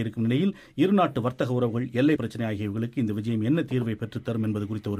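At 2.15 s the audio jumps ahead: compressed frames skipped, around two frames missing or rejected, cutting roughly 50 ms.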